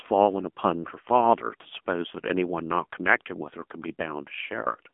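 From the first moment to the end, the speech has been through the AMR narrowband mobile codec, the old 2G/3G phone coder, and the damage is plainly audible. It rebuilds the voice from a vocal-tract model fed by sparse pulses, and the buzzy, synthetic edge here fits a low mode around 7.4 kbps. The band sits roughly between 200 Hz and 3.4 kHz, with nothing at all above 3.6 kHz, so everything sounds boxed-in and phone-like.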